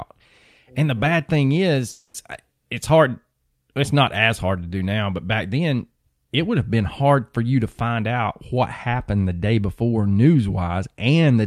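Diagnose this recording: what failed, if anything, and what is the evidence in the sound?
A call audio freeze sits between "the bad thing" and "it's hard", from 1.89 to 2.16 s. The last sound is stretched into a fading fill for about 250 ms. Nothing is lost afterwards, but the speech now runs 250 ms later. This likely comes from network packets arriving late and draining the jitter buffer.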